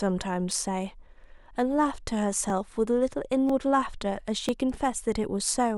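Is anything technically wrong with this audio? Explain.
Yes. Audio is missing between chunks at 0.51, 1.51, 2.50, 3.49 and 4.49 s, a 1.0 s repeat. Each is a tiny skip of a few milliseconds where the speech jumps forward, likely from a piece being dropped as one processing chunk closes and the next opens.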